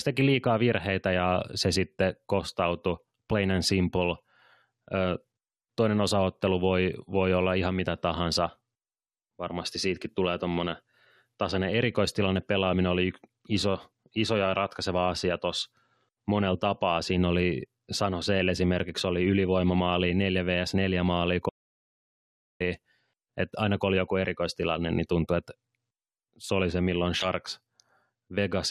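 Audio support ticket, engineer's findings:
Audio dropout to silence, 21.49 to 22.60 s: input likely lost upstream, encoder kept writing silence. Speech cuts mid-flow, 1.11 s of dead silence, no room tone, content gone.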